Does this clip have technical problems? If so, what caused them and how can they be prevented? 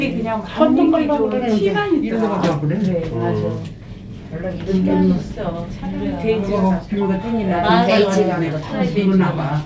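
No, nothing stood out on listening to this audio, which came through a call connection with its content ending at about 8 kHz, so there is nothing here that needs preventing.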